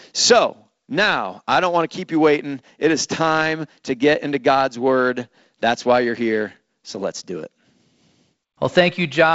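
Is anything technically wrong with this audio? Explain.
No, nothing here sounds technically wrong.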